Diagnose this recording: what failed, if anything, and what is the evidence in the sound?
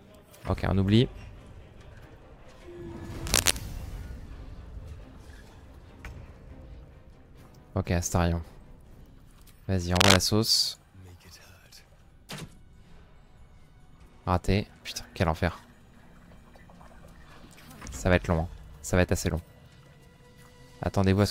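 Cable scratch noise, most likely from the analogue wiring stage, appears twice: from 3.27 to 3.57 s and from 9.91 to 10.18 s. Each burst is a dense, uneven rasp of scratching that sits roughly 5 dB above the sound for about 0.3 s. On a spectrogram these show as ragged broadband smears; on the waveform they show as jagged, irregular spikes. The likely cause is a worn connector or cable whose contact resistance fluctuated as it moved.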